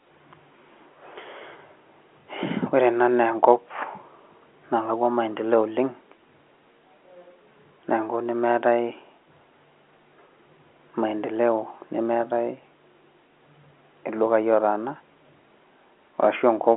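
No technical faults can be heard in the speech, which comes through a G.711 telephone line at its usual narrow band of about 250 Hz to 3.4 kHz.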